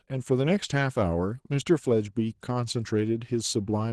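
Opus voice compression runs throughout the speech. A linear-prediction coder handles everything below 8 kHz and a transform layer covers the top. At a rate pointing to about 16 kbps, both layers are starved, so the speech sounds plainly hoarse and slightly robotic.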